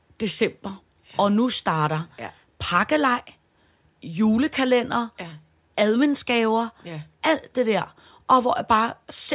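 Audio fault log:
No faults are heard in this speech recording. Nothing in it calls for an entry in this log.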